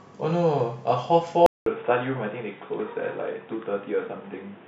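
At 1.46 s the speech drops out for 200 ms, then returns dull and boxy with a fresh noise floor well below it at unchanged level, likely the input switched to a poorer device. The spectrogram shows a gap, then nothing above 3.8 kHz.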